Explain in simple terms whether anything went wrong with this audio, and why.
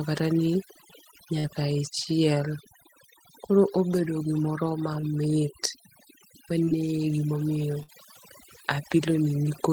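Several things went wrong here, a few of them stacked on one speech recording.

The whole clip has overdone noise removal. Someone cleaned up a noisy recording with a setting that was far too aggressive. Whenever part of the sound came close to what the tool thought was background noise, it cut it right down, and the softer bits of the voice got cut too. So the background drops away and breaks up into little twinkly specks.

There are two bursts of packet loss, where a chunk of the call arrived too late or not at all. The first is from 1.39 to 1.48 s. The receiver stretched out the last bit of sound for about 46 ms while letting it fade, then picked up again with about 40 ms of real audio gone. The second, from 7.83 to 7.90 s, is the same thing a bit bigger: about 55 ms of stretched, fading sound covering a 60 ms hole.

From 3.93 to 4.00 s there's a wireless microphone noise hit. The radio link of the mic briefly faded, so receiver noise jumped up. 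You hear it as a quick swish of static lasting well under a tenth of a second.

Around 5.0 to 5.05 s there's a short concealed packet loss. About 20 ms never made it, and the receiver papered over it with roughly 19 ms of guessed sound built from what came just before, then blended back in. It's very brief, more a little smear or wobble than a gap, but any short consonant sitting there could simply drop out.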